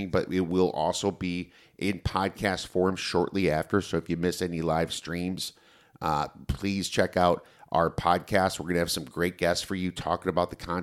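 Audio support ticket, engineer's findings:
Listened to the whole speech recording and nothing wrong turned up, so there's no fault to log on this one.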